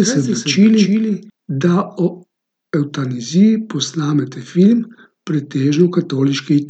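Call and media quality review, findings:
Doubled audio track, from the start to 1.3 s: a full-band second copy of the speech trails by around 300 ms, about 5 dB down, dry with no decay, and cuts off abruptly. Likely a second capture via a slower path mixed in.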